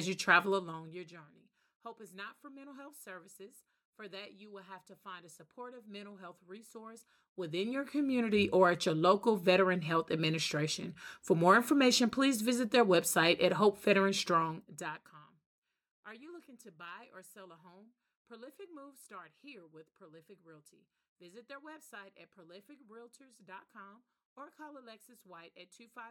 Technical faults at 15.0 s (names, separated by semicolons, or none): zipper noise